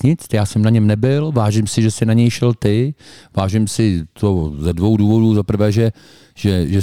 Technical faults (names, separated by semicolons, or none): crude rate conversion